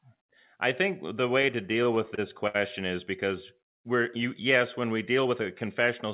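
Repeated stalls (stutter) from 1.42 to 2.56 s: the jitter buffer ran dry eight times, and the receiver stretched the last sound over 160 ms, the longest gap 67 ms, so the speech drags and stutters with nothing lost.

Jitter buffer speed-up from 5.18 to 5.87 s: excess buffered audio was trimmed by cutting roughly 40 ms of pitch periods, so the speech runs about 5% faster at unchanged pitch, sounding slightly hurried within the 4 kHz band of the call path.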